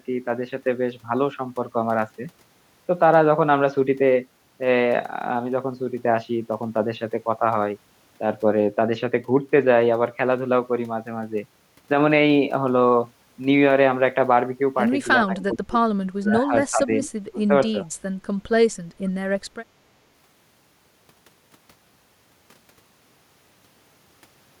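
Between 15.25 and 17.75 s the speech keeps dipping out, at 15.25–15.84, 16.15–16.53, 16.71–16.91 and 17.31–17.75 s, sinking by up to about 30 dB. That's speech suppressed in double talk, likely because both ends were talking and the echo canceller ducked the near talker along with the echo. Tucked into that stretch, at 15.38–15.43 and 17.02–17.10 s, there are brief ghostly scraps of voice trailing 423 ms behind and roughly 15 to 20 dB down. That's echo leak, likely from a speakerphone whose canceller let some of its own playback slip back down the line.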